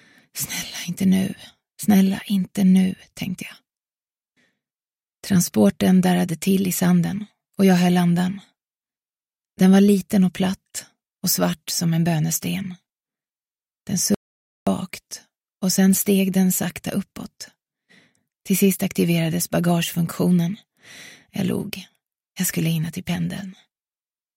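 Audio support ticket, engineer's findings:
Audio dropout to silence, 14.14–14.67 s. Input likely lost (link failure, disconnect or mute) while recording continued writing silence. Sound cuts out mid-flow, about 0.52 s of silence, no room tone; content in gap gone.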